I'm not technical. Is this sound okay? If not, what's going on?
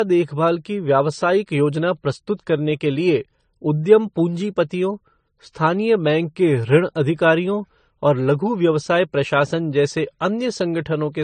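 No. The speech was most likely compressed by one audio format and then compressed again by another, which is called transcoding between lossy codecs. Throughout, the blurry, swirly flaws from both rounds pile up, and nothing above 9 kHz survives, so everything sounds dull.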